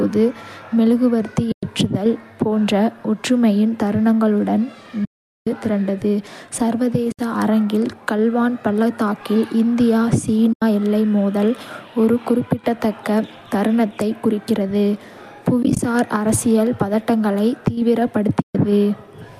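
The speech drops out six times from AAC frame loss with muting: 1.52–1.63 s, 5.05–5.47 s right after "ஒற்றுமையின் தருணங்களுடன்", 7.12–7.19 s, 10.53–10.62 s just before "எல்லை மோதல் ஒரு", 15.63–15.79 s as scattered blips of around 20 ms before "அரசியல் பதட்டங்களை", and 18.42–18.55 s. The decoder zeroes the missing frames, so each gap fades out and back in. The gaps match 10 ms frames, likely from the low-delay AAC stream.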